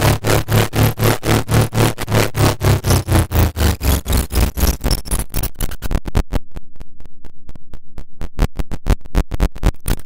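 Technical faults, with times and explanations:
2.03–2.05 s, skip ahead: Playback jumps forward abruptly, with roughly 0.4 s of sound simply missing and no silence or fill in its place. Audio that was already waiting in the buffer was discarded, so the material on either side of the cut is butted together and the audio lurches ahead. On a waveform the envelope changes shape suddenly at the splice. A spectrogram shows a hard vertical seam where the harmonic and noise patterns fail to continue across it.
2.64–3.23 s, jitter buffer speed-up: For about 0.6 s the sound runs at roughly 107% speed while keeping its pitch, so it feels slightly rushed. The buffer had built up more delay than it wanted, and the receiver trimmed many tiny slices of one or a few pitch periods back to back, removing around 50 ms in total. On a spectrogram, events in this stretch sit closer together in time but harmonics stay at the same frequencies. 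A waveform shows repeating cycles shortened, with small seams at each trim.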